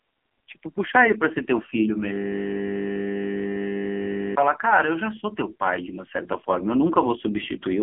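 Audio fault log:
Throughout: AMR narrowband mobile codec. The speech sounds thin, buzzy and synthetic, confined to roughly 250 Hz to 3.4 kHz with nothing above 3.5 kHz. Heavy damage at a very low bitrate, consistent with AMR-NB around 5.9 kbps, rebuilds the voice from a crude vocal-tract model.
2.13 to 4.36 s: System hang loop. A steady 50 Hz buzz replaces the speech for over two seconds as one 20 ms piece of audio repeats about 111 times. The system froze while the sound hardware kept replaying the same short buffer.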